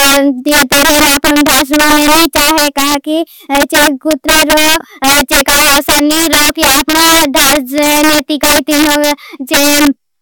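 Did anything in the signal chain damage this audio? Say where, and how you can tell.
Yes. Integer overflow damages the speech throughout, at the sample-format conversion or gain stage. Loud peaks crack violently, harsher than clipping. The gain ran about 14 dB too hot. Samples past full scale wrapped to the opposite sign instead of limiting, affecting around 7 percent.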